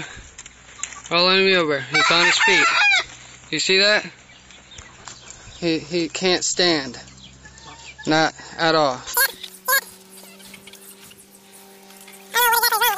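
At 9.14 s the sound suddenly races and jumps way up in pitch, and it stays like that right to the end at 12.98 s. That's a wrong sample rate: the samples are being pushed out much faster than they were captured, with no conversion in between. Everything runs 2.76 times too fast and sits about 17.6 semitones higher, which fits 16 kHz material being played back at 44.1 kHz.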